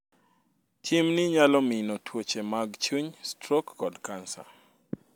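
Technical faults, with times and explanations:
No technical faults can be heard in this speech.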